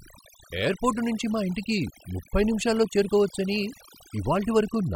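Speech throughout, affected by overdone noise removal from start to finish. The noise reducer was set too hard. Bands near its noise estimate get cut off. Quiet parts of the voice vanish with them. Pauses fall to near silence with twinkling specks.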